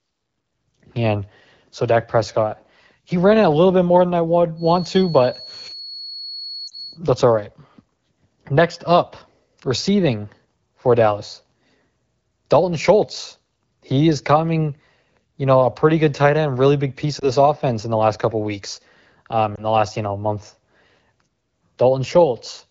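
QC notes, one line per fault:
4.54–7.00 s, feedback whistle: a steady 4.4 kHz tone sits about 15 dB under the speech, likely a speaker-to-microphone loop held at the edge of feedback. It shows as a thin horizontal spectrogram line.
6.68–6.72 s, 17.19–17.27 s, 19.55–19.64 s, lost AMR speech frames: the decoder reuses the last good pitch and vocal tract settings with falling gain, causing brief dips or warbles. The first gap lasts 40 ms, fitting two frames, and the others last 20 ms each. The waveform shows short amplitude dips.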